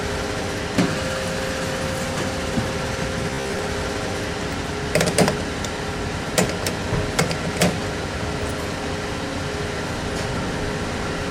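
From 3.31 to 3.62 s the sound turns into a rigid, metallic buzz pitched at 66.7 Hz: robotic sound from repeated short buffers. A 15 ms block was likely being replayed while fresh audio lagged, with roughly half the material repeated rather than new.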